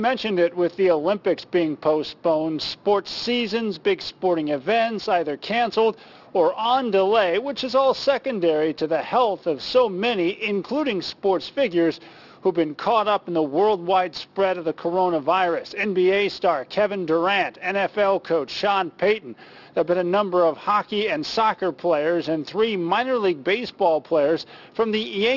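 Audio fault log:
throughout: aliasing. Highs above 6 kHz fold back as gritty, metallic tones about 20 dB down, which fits unfiltered downsampling to 12 kHz. The spectrogram shows mirrored energy packed against 6 kHz.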